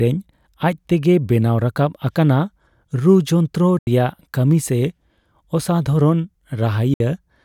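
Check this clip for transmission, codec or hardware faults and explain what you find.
Two short gaps interrupt the speech. Both are likely a Bluetooth dropout. The first runs from 3.79 to 3.87 s and loses about 81 ms. The second runs from 6.94 to 7.00 s and loses about 61 ms. Audio packets arrived too late and were discarded. The sound cuts to silence with abrupt edges or a fade of a few milliseconds. It then resumes further along, as though it had kept playing.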